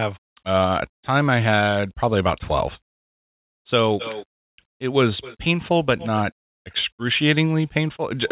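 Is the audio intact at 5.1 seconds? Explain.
Yes, the speech is intact at 5.1 seconds, with no dropout, glitch or distortion at that moment, only the narrow telephone-style bandwidth of a call path that passes nothing above 4 kHz.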